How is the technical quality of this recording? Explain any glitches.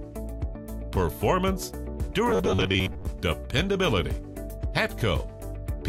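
The recording has one glitch. From 2.29 to 3.09 s, audio likely arrived too seldom, so a 10.7 ms chunk kept repeating. This is robotic sound from repeated short buffers, heard as a rigid, metallic buzz at 93.8 Hz.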